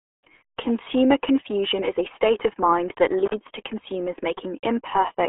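From start to finish the speech carries the damage of the RealAudio 14.4 codec. It is confined to a telephone-like band of roughly 300 Hz to 3.4 kHz and heavily muffled and gargly, which fits a starved 8 kbit/s stream. On a spectrogram everything above 3.6 kHz is empty.

At 3.26 to 3.34 s an intermittent contact briefly breaks the connection, leaving the line open for about 48 ms. The sound drops out with crackle at both edges and faint hiss in the gap. The waveform shows a near-flat stretch bracketed by sharp spikes.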